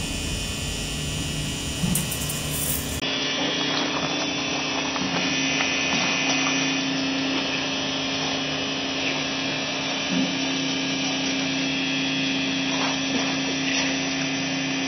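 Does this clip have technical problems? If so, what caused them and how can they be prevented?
Yes. From 3.00 s to the end the sound turns duller, with nothing above 5.9 kHz, a 20 ms gap at the change and a faint new noise floor well below the signal. The likely cause is an input switched to a poorer device. Locking the recording input prevents it.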